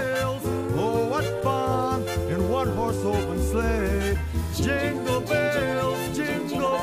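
No technical faults can be heard in the audio.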